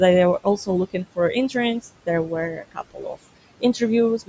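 A speech clip recorded through call microphone processing, with nothing above 8 kHz and room noise sitting about 16 dB below the speech. Noise suppressor artifacts run through the whole clip: the suppressor pulls the room noise down by about 21 dB, frame by frame, so the background sinks in the gaps and rises under the speech. Speech cut by the noise suppressor occurs twice. Just after "were also looking for", between 1.34 and 1.56 s, about a tenth of a second of speech is dipped by up to about 10 dB. From 2.52 to 3.17 s, a deeper cut of up to about 19 dB swallows roughly 0.4 s in total. In both places the suppressor misjudged low-level speech as noise, leaving those stretches faint.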